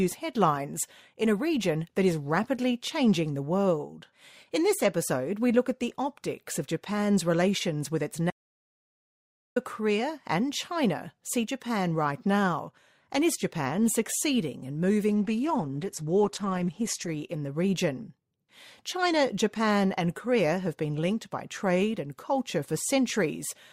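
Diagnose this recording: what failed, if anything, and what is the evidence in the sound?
Two things went wrong. First, an audio dropout to silence from 8.31 to 9.56 s. The speech cuts off mid-flow and about 1.26 s is silent with no room tone, so the input was likely lost upstream while the recorder kept writing silence.

Second, a switch in the adaptive stream to a lower bitrate from 15.09 to 17.09 s. It's a network-side codec change: nothing above 12.2 kHz, thinner and more artefact-laden, with no gap. That fits Opus stepping down from roughly 64 to 12 kbit/s, then recovering.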